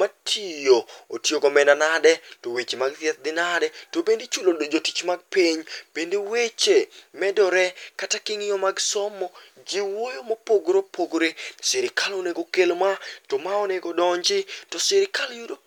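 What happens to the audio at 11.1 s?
Nothing goes wrong at 11.1 s: the speech runs on intact, with no dropout, click, distortion or other audible fault at that point.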